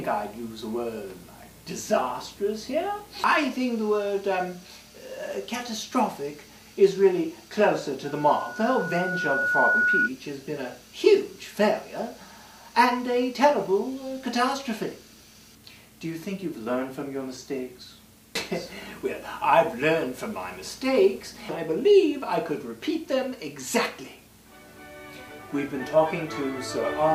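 From 8.04 to 10.10 s a steady 1.5 kHz tone swells over about a second and a half into a piercing squeal, peaking roughly 5 dB above the surrounding sound. This is loudspeaker feedback squeal: a microphone picked up its own loudspeaker, and at that frequency the loop gain exceeded one.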